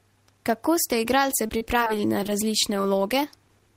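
Speech, and between 1.46 and 2.29 s it goes choppy and robotic from repeated packet loss. Seven short holes land in that stretch, the longest about 38 ms, adding up to roughly 130 ms of missing audio. Each one gets papered over by stretching out the sound just before it, so about 15% of that span is really concealment rather than the original, which is where the robotic, stuttery texture comes from.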